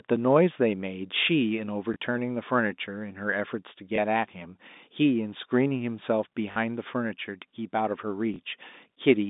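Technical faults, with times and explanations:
1.94 s, 3.96 s, 6.52–6.56 s, 8.34 s: packet loss with last packet repeated. Each lost 20 ms packet is replayed from the one before, heard as a small blip, or a brief stutter where two run together. This shows as duplicated waveform blocks.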